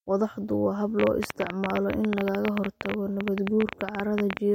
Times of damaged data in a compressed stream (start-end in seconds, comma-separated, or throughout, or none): none